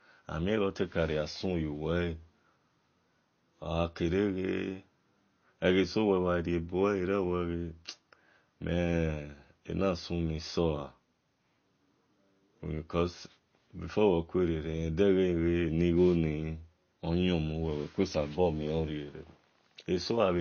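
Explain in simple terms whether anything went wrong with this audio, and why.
Throughout the clip, the speech sounds watery and swirly, and nothing is heard above about 6.6 kHz, so s sounds are dull. This is MP3 compression, likely from saving at a low quality setting, where the encoder discarded treble and quieter detail to save space.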